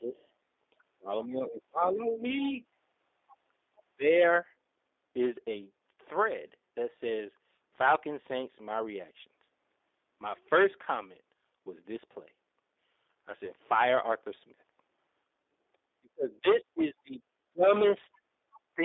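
The whole recording passes through the G.729 codec at 8 kbit/s, and its damage is plainly audible. The band runs only from about 300 Hz to 3.7 kHz. The speech is rebuilt from a filter and a few pulses per frame, so it sounds rough and synthetic.

From 0.16 to 0.24 s, a faint trace of the other side's voice leaks through, very far below the speech. The likely cause is an echo canceller that left a scrap of loudspeaker sound in the microphone.

From 3.85 to 4.06 s, speech is suppressed in double talk. The voice dips by about 30 dB for roughly 200 ms. Both sides seem to talk at once, and the canceller likely turns everything down.

Around 13.45 to 13.51 s, there is a brief smear where packet loss is concealed by the speech codec. This fits a single lost 10 ms frame. The decoder extrapolates from its last pitch and fades, and the voice stays weak just afterwards.

From 16.0 s to the end, speech is suppressed in double talk again, for about 1.5 s in total. 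It drops by about 35 dB in places. From 17.77 to 18.6 s, the other side's voice leaks through clearly, only about 15 dB below the speech.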